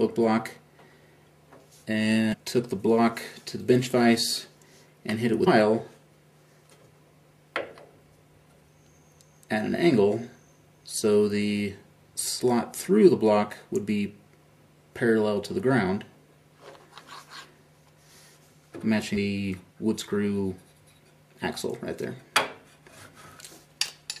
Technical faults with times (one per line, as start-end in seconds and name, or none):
2.32-2.35 damaged data in a compressed stream
5.46 damaged data in a compressed stream